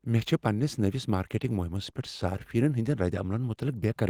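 No technical faults detected.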